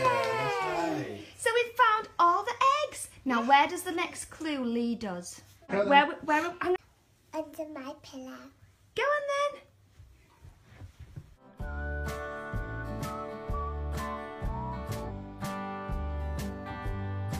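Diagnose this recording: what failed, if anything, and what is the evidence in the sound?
The codec stage failed: damaged data in a compressed stream. Brief glitches occur at 5.67–5.73 s, 6.74–6.79 s and 15.05–15.11 s, each about 50–60 ms. The decoder misreads corrupted frames and resyncs.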